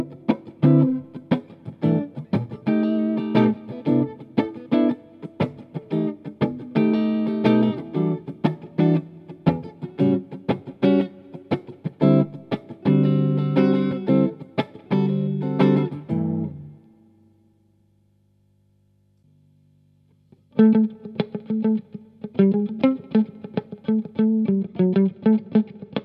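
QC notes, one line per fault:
24.55–26.04 s, channel delay (comb filtering): one channel trails the other by a couple of samples, a few hundredths of a millisecond, so the mono sum cancels around 10 kHz and the top end turns dull; a spectrogram shows a fixed dark notch band there.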